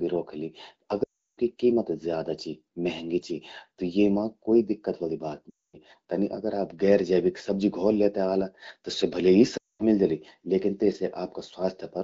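It's a speech clip with three bursts of lost AMR speech frames, at 1.04–1.38 s (just before "कीमत ज्यादा चि"), 5.49–5.76 s, and 9.57–9.83 s (between "स्या भले ही" and "मिल जलि लेकिन"). In each, the decoder reuses the last good sound and drops it to near silence within two frames, leaving gaps of 340, 240 and 220 ms.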